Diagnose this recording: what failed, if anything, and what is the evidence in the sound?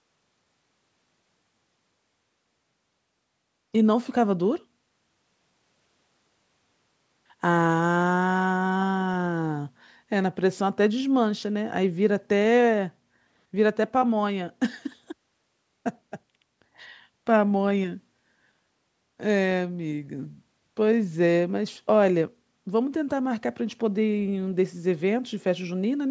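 Nothing failed in this recording, and the sound gives no evidence of any fault; the only audible traces of the call microphone processing are its normal trimming of the lowest bass and the absence of any content above 8 kHz.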